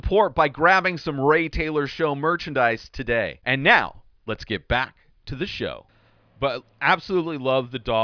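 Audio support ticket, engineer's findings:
Engineer's findings: no audio fault found in the speech recording.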